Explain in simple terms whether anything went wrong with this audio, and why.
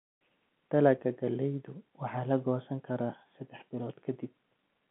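Nothing went wrong; it's ordinary telephone-quality speech.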